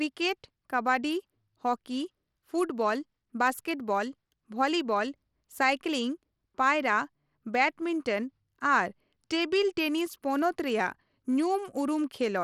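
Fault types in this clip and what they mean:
Bluetooth SBC compression: throughout, likely a low-bitrate Bluetooth link; coarsely quantised sub-bands leave plainly audible grit on the speech, with nothing above 17.2 kHz.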